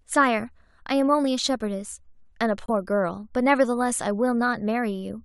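At 2.66 s the speech drops into a sudden hole lasting about 40 ms, ending at 2.70 s: a corrupt frame muted. A damaged compressed frame was rejected by the decoder and replaced with silence, which fits one frame's worth of audio. On a waveform it shows as a flat gap cut off sharply, and on a spectrogram as an abrupt blank vertical stripe, with timing intact on either side.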